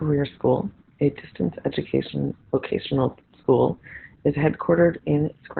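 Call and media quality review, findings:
Opus voice compression, whole clip: nothing above about 4.4 kHz; speech muffled, hoarse, robotic. Coarse SILK excitation, not a simple low-pass. Points to roughly 8 kbps narrowband.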